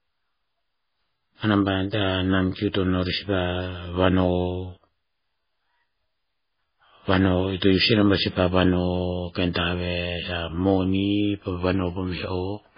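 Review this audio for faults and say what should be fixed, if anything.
Throughout, the speech sounds watery and swirly with nothing above 5 kHz, likely from heavy MP3 compression. A spectrogram shows a hard 5 kHz ceiling and flickering holes. Keep a lossless or high-bitrate copy to avoid this.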